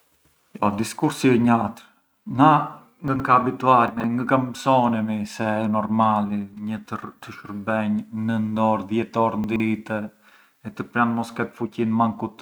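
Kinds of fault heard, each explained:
Chunks out of order: 40 ms blocks play two or three slots late, jumbling speech near 3.1, 3.9 and 9.4 s; joins show as waveform steps and vertical spectrogram clicks.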